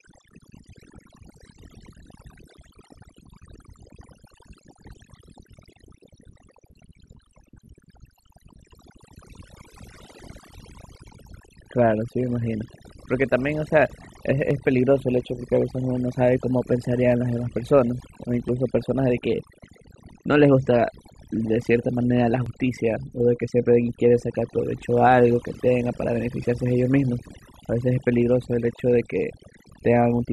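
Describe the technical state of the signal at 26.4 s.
At 26.44 s there is a brief skip, most likely audio missing between chunks: a piece of roughly 20 ms seems to have been lost at a 4 s block boundary, with the two sides butted together. Unlike a dropout, no silent gap is left, only a sudden jump.

Overdone noise removal is also present here, as across the whole clip. Bands near the noise floor are pushed far down, leaving near-silent background with twinkling specks. Unlike a splice skip, this is continuous rather than a single event.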